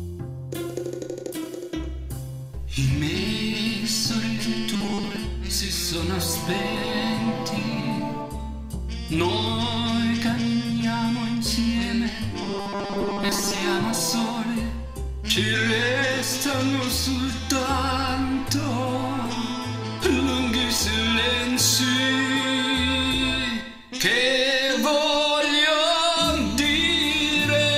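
Robotic sound from repeated short buffers appears from 4.74 to 5.16 s and again from 12.43 to 13.59 s: a rigid 200 Hz metallic buzz replaces most of the sound. It likely comes from audio arriving too slowly, with the last 5 ms fragment looped to fill the gaps.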